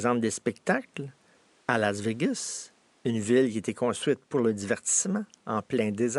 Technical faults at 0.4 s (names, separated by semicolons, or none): none